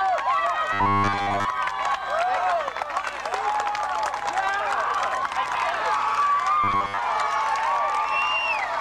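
From 0.73 to 1.46 s, and again from 6.64 to 6.99 s, the audio is likely starved of new data and refilled by looping a 10 ms buffer, with roughly 70% of it repeated. This produces robotic sound from repeated short buffers: a rigid, metallic 100 Hz buzz that only roughly tracks the underlying sound.

From 5.37 to 5.55 s, two neighbouring blocks were decoded in swapped order, which fits single frames of about 93 ms each. These frames out of order make a brief garbled flutter as the stretch plays with its halves exchanged. No time is lost.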